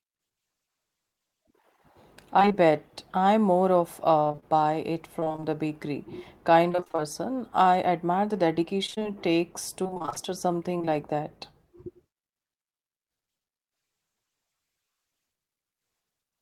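Speech with two kinds of transmission fault. Repeated packet loss (robotic sound) occurs in four bursts: 2.39 to 2.56 s (5 gaps, with about 38% of that span concealed), 4.20 to 5.44 s (12 gaps, from just after "more of" up to "the bakery kind"), 6.72 to 7.00 s (7 gaps, about half concealed), and 8.86 to 10.90 s (17 gaps, starting right after "I admire the"). Each missing chunk, at most 28 ms long, is patched by extending the preceding sound, giving a choppy, metallic texture. The gap lengths fit 20 ms packets. On a spectrogram these stretches show short blocks of frozen, flat harmonics with hard vertical seams, and the waveform shows one cycle copied several times in a row. A jitter buffer slow-down runs from 2.60 to 3.24 s, just before "more of". The receiver repeated pitch periods to add 41 ms and rebuild its reserve, so that passage plays at 95% speed with unchanged pitch. The spectrogram keeps the same harmonic spacing while features stretch slightly in time, and the waveform shows duplicated periods.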